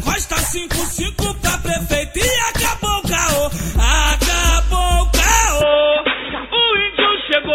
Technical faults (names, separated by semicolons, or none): input switched to a poorer device